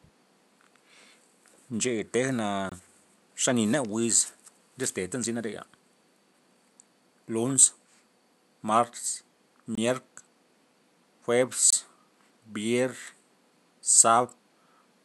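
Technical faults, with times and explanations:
2.69–2.72 s, 9.75–9.78 s and 11.70–11.73 s: block of digital silence. The speech drops to silence for about 23 ms each time, with no fade in or out, so you hear a short hole. Same length every time, which fits a 1024-sample buffer not being filled in time.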